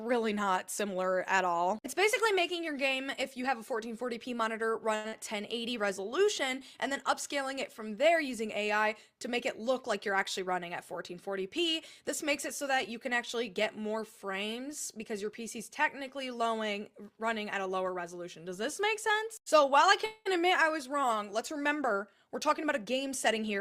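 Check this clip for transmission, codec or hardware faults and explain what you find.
Several transmission faults are audible, all from packet timing on the receiving side.

At 4.95 s there is a short stall from a late packet. It lasts about 0.11 s. A packet had not arrived when due, and the jitter buffer ran dry. The receiver held the last sound for 89 ms until the packet came, then resumed from the same point. Nothing is lost. The sound is simply held too long, with a faint buzz or dip.

At 5.08 s comes a short concealed packet loss, about 0.06 s long. Here 80 ms of audio never reached the decoder in time. The receiver covered the hole with 41 ms of synthesised continuation of the previous sound, then blended back into real audio. The gap is short, so it registers as a brief smear or wobble. The audio jumps forward by roughly 40 ms.

From 5.41 to 6.18 s there is a jitter buffer slow-down. 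The buffer was low, so the receiver rebuilt its reserve. It repeated tiny pieces of the signal many times in a row, adding 37 ms in total. The audio plays at 96% speed with unchanged pitch. Sounds are slightly drawn out.

There are two jitter buffer speed-ups. The first runs from 10.1 to 11.5 s and the second from 22.27 s to the end. Both times the buffer held more audio than its target. The receiver trimmed short pitch-period slices repeatedly to reduce delay. The first runs at 103% and removes about 50 ms. The second is stronger, at 109%, and removes about 100 ms. Pitch stays put, but the second sounds hurried.

From 20.06 to 20.27 s the audio freezes. It holds for 197 ms as a fading continuation of the last sound, ending in about 20 ms of silence. Then it carries on from where it stopped, so nothing is missing and a gap has been inserted. This call audio freeze was likely caused by packets held up in transit, emptying the jitter buffer.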